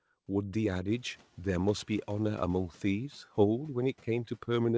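Noise suppressor catching up from 0.87 to 1.26 s: the room noise jumps, slips through with only about 5 dB cut, then sinks as it adapts.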